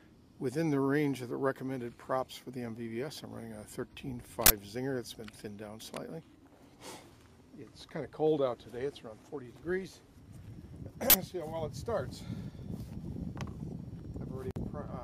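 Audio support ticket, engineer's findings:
Uninitialised buffer, 4.46 s and 11.10 s: playback reached a 40 ms block before audio was written, so stale memory played as samples. Result: two short, loud bursts of digital noise.

Gap at a join of encoded pieces, 14.51 s to 14.56 s: separately encoded segments joined untrimmed, leaving encoder delay and last-frame padding. Result: a gap of about 52 ms with smeared edges, so the silent part is shorter, then the sound resumes where it stopped.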